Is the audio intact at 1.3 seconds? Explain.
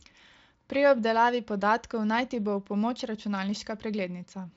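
Yes, at 1.3 seconds the speech is intact, with no dropout, click or other fault.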